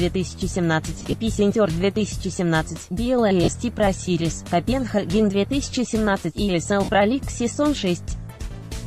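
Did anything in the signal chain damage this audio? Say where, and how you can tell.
Yes, lost LE Audio frames on the Bluetooth link: dropouts at 1.00 to 1.13 s (scattered, longest gap around 30 ms), 3.44 to 3.48 s and 6.84 to 6.89 s. The LC3 decoder fills each gap by repeating the last spectrum with randomised signs, so you hear a short noisy smear instead of clean sound, a pattern that fits 7.5 ms frames.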